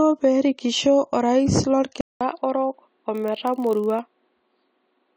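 A speech clip with three technical faults. Throughout, the audio is dull and smeared, with a warbling, fizzy edge on sibilants. This is likely AAC compression at a low bitrate, near 32 kbps. The encoder drops the highest band and coarsely quantises what remains. At 2.01 s the sound goes silent for 200 ms, then returns narrower and boxier. The level falls by about 5 dB, and a new noise floor sits well below the speech. This likely marks the input switched to a poorer device, one with a narrower band and its own tone. From 3.13 s to 4.00 s a 46.9 Hz buzz rides over the speech. This is a block size mismatch, padded. An earlier stage writes slightly short blocks, and zeros fill the rest of each block. The buzz rate fits a 1024-sample read block. The added gaps slow the audio only marginally, by a factor of 0.999, so the timbre stays the same.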